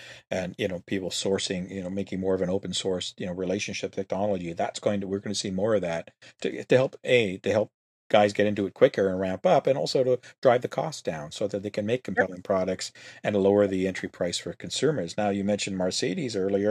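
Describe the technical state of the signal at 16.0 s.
At 16.0 s the speech signal is intact, with no audible fault at that moment.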